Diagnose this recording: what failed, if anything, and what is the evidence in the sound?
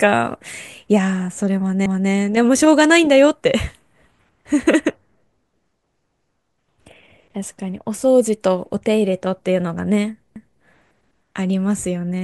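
Overlapping chunks at 1.86 to 2.11 s, 6.11 to 6.36 s and 10.36 to 10.61 s, where each time about 250 ms of speech plays twice, producing a stutter at evenly spaced joins. The fault sits in the buffer or chunked-processing stage. The audio was handled in 4-second blocks, and each new block began 250 ms before the previous one had finished, so the tail at every boundary was replayed rather than continued.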